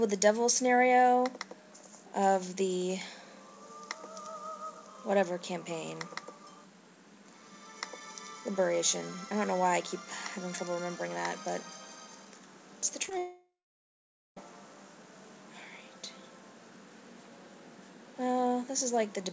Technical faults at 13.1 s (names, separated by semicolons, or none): short concealed packet loss; long network dropout